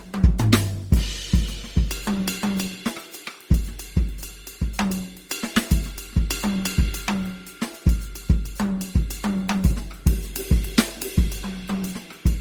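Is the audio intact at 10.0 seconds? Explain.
No. Generation loss runs through the whole music clip, including 10.0 seconds. It sounds swirly, smeared and hollow, with blurred attacks, likely from about seven re-encodings consistent with Opus at 48 kbit/s.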